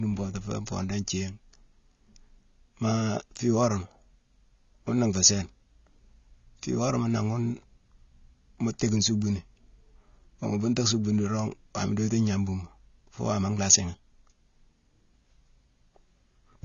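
Speech, with AAC compression damage throughout. Nothing is heard above 7 kHz. The codec damage is plainly audible. The sound is dull and smeared, with a warbling, fizzy edge on sustained sounds and sibilants. The likely cause is AAC-LC encoding at a low bitrate, which fits 24 kbps.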